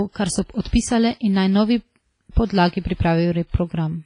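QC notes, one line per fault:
Throughout: WMA compression. The damage most likely comes from a Windows Media Audio transform encoder running at a low bitrate, which fits roughly 24 kbps. Heavy quantisation zeroes weak detail and removes everything above 10.1 kHz, so the speech sounds dull, washy and ringing, with hiss breathing along with it.
0.61–0.65 s, 0.68–0.73 s and 2.46–2.50 s: pre-echo. Sharp attacks landed late within transform blocks. The block's quantisation noise, sized for the loud onset, spilled into the quiet just before it, spreading about 41, 52 and 40 ms. This gives a brief hiss ahead of each attack and softened, smeared onsets.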